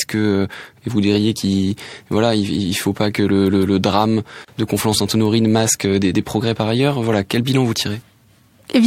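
At 4.45 s, right after "pas que le drame", the speech drops out for about 33 ms, a gap at a join of encoded pieces: separately encoded segments were spliced untrimmed, leaving encoder delay and frame padding. The waveform shows a flat, slightly smeared hole; the spectrogram shows a thin vertical blank band.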